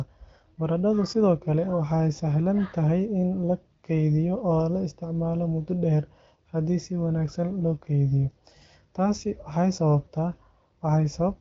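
Speech carried over the AMR wideband (HD Voice) codec at 15.85 kbit/s, band-limited to about 7.5 kHz with only light coding damage, and no faults to report.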